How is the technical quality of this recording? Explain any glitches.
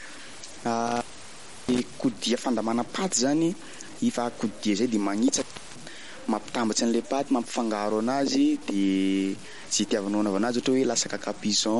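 The recording has poor technical quality, with heavy grain, codec smearing and two dropouts.

Low bit depth without dither runs through the whole clip. The speech sounds gritty, with distortion that tracks the voice. This likely comes from truncation to about 5 bits. The rounding error then follows the signal, at roughly 20 dB below it.

MP3 compression is also present throughout. Nothing is heard above 11.2 kHz. The sound is watery and swirly, with metallic chirps on s sounds and smeared attacks. This is likely a low-bitrate encode, which fits about 48 kbps. Too few bits means weak detail gets dropped.

Intermittent contact causes two dropouts. The first runs from 0.87 to 1.83 s, with the line open for about 0.68 s. The second runs from 5.37 to 5.80 s, open for about 0.34 s. A loose connection breaks briefly. The sound cuts out, with crackle at each edge.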